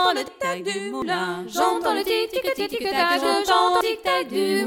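The audio jumps forward at 0.28, 1.02, 2.60 and 3.81 s, each time losing about a tenth of a second, twice that at the last one, with no gap. That's likely a dropped buffer (overrun), where samples got overwritten before being read.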